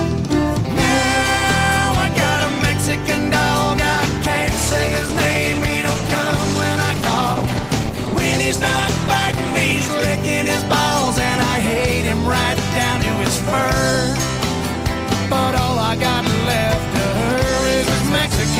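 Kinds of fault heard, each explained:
Call bitrate drop: From 3.95 s to 11.55 s the encoder falls from 32 to 14 kbps, coarsening detail. It sits lowest for about 5.5 s, sounding rough.
Mains buzz: From 16.54 s to the end, a raspy 50 Hz buzz appears. Its harmonics reach into the kilohertz range, about 15 dB below the signal.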